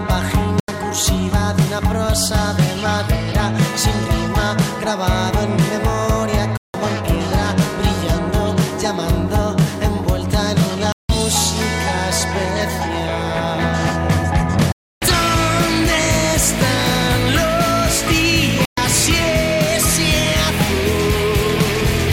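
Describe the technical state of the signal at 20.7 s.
At 20.7 s the signal is intact, with no dropout, clipping, glitch or other fault to be heard.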